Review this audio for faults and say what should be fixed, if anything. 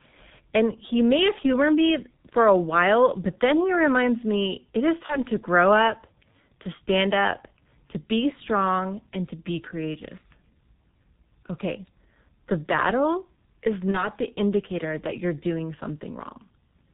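The whole recording sounds muffled and hoarse, with smeared consonants and nothing audible above 4 kHz. That is the G.723.1 codec. It codes speech in 30 ms frames with a coarse, slowly updated voice model, and the heavy damage heard here fits its 6.3 kbit/s mode. Re-recording or transcoding through a wideband, higher-rate codec such as Opus at 16 kbit/s or more would avoid this.

From 5.06 to 5.25 s and again from 13.91 to 14.09 s, the speech briefly turns into a buzzy tone or coloured noise that fades, and then recovers weakly over the following tens of milliseconds. This is VoIP packet loss concealed by the speech codec. The decoder filled a gap the length of a single 30 ms frame by extrapolating its last pitch and filter at falling gain, and because each frame builds on the previous one, the effect lingers after the packets return. A larger jitter buffer, forward error correction or packet redundancy on the network path would prevent these dropouts.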